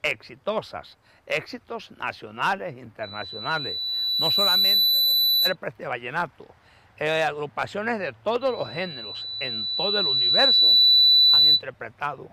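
At 3.03 s a loudspeaker feedback squeal starts: a pure tone at 4 kHz swells over roughly two seconds to about 10 dB above the rest of the sound, then cuts off at 5.55 s. The microphone is hearing its own loudspeaker, and at 4 kHz the loop gain tops one, so that frequency keeps feeding itself. It returns from 8.41 to 11.63 s, same pitch and similar rise, but louder, about 15 dB over the sound.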